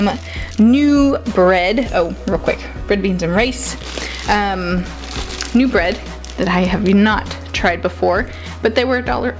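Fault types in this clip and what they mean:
No faults identified; nothing to list.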